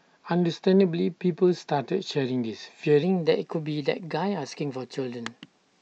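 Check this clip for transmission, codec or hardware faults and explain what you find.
One fault is present: a wrong sample rate from 3.03 s to the end of the clip. At that point the audio starts being played faster than it was captured, with no rate conversion. The speed-up of 1.09 times fits 44.1 kHz material read out at 48 kHz. Because timing and pitch are tied to the same clock, the speech becomes about 9% faster and rises by 1.47 semitones together, sounding slightly hurried and higher-pitched than before.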